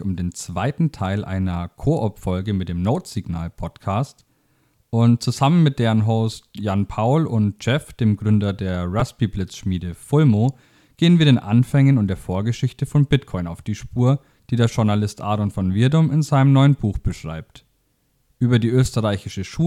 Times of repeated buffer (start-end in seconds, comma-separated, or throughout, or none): 9.00